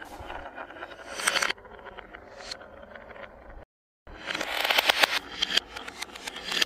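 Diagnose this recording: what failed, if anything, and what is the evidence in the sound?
The failure is a rebuffering stall at the playback stage. At 3.63 s the sound drops abruptly to silence and holds there until 4.07 s, then picks up exactly where it left off. Nothing is skipped or repeated, so the gap is pure added time, about 436 ms. That is the signature of a streaming player draining its download buffer, halting output while it waits for more data, and resuming once enough has arrived.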